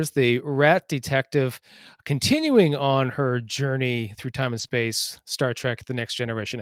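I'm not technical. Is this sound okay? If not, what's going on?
No. Around 4.6 seconds, right after "journey through time and", two problems happen almost back to back.

First, from 4.59 to 4.65 s, is a lost packet rebuilt from error correction. A small chunk of the call, about 40 ms, which fits two packets, never arrived. The packet that came next carried a cheap backup copy of it, and the receiver played that instead. So there is no gap, but that brief stretch sounds rougher and noisier than the speech around it.

Then, from 4.67 to 4.71 s, comes a short concealed packet loss. About 20 ms of audio went missing and had no backup copy. The receiver filled the hole by stretching out the sound it had just played, then blended back into the real audio. You hear this as a tiny smear or wobble, very soon after the rough patch, so the two may run together as one brief blemish.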